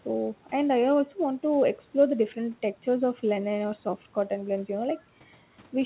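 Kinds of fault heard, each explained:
No faults can be heard in this speech.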